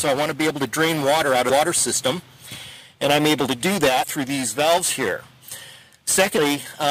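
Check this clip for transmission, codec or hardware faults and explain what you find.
Three points show compressed frames skipped. At 1.49 s, 4.02–4.04 s and 6.36 s the sound jumps ahead, losing roughly 150, 100 and 150 ms. Whole frames of about 23 ms were left out, either missing from the file or refused as damaged, so the audio skips ahead by the length of the missing frames.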